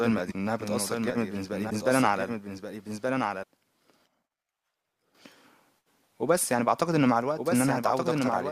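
From the start, the speech is heard twice. A second full-band copy trails the first by about a second, roughly 5 dB quieter. It carries no decay and no room colour, so it is not an echo. This doubled audio track is likely from the same signal being captured again through a slower path, or an edit holding two copies out of step. The two layers run against each other throughout.

At 0.30 to 0.33 s the audio jumps ahead. The same fault returns at 1.69 to 1.72 s, and again at 3.42 s, shorter. Each lasts about one frame, which fits 24 ms MP3 frames. This is likely a broken MP3 bit reservoir. Frames were lost, and the next frame reached back for borrowed data that belonged to another frame.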